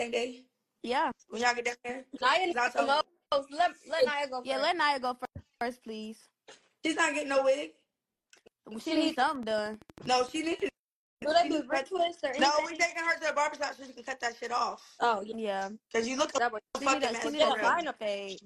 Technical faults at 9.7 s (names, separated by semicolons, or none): train of clicks